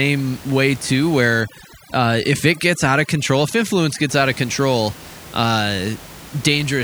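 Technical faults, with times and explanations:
1.41–4.09 s, overdone noise removal: in this stretch the room noise, which elsewhere sits about 20 dB below the speech, drops to near silence dotted with twinkling specks. A noise reducer set too strong is cutting individual frequency bands whenever they fall near its noise estimate, taking quieter speech detail with them. On a spectrogram the background goes dark with isolated scattered dots, and the speech harmonics look patchy and gapped.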